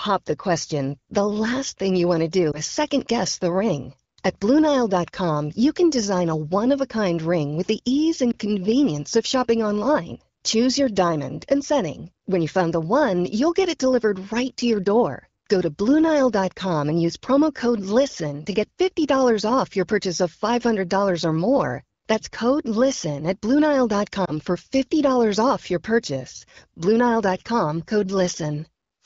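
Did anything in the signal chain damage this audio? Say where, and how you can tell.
Yes. Radio-link errors caused lost AMR speech frames, one 20 ms frame each, at 2.51 s after "you want to do", 8.32 s after "ring with the ease", and 24.25 s. Concealment replayed the prior frame at reduced gain, so each is heard as a brief dip or warble.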